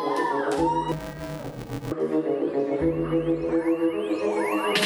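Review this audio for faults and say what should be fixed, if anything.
From 0.92 to 1.92 s there's interleaved audio read as planar. Each short block of alternating left-right samples gets split in half and played as two channels, so the sound turns dull and robotic with a 345 Hz buzz, which fits 128-sample blocks of about 2.9 ms. To prevent it, make sure the reader's channel-layout flag matches the buffer it's handed before playback.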